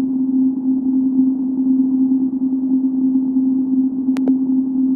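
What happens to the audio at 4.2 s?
A loud pop occurs from 4.17 to 4.30 s, likely a voltage pulse from a plug or switch, heard as two sharp thumps over the sound.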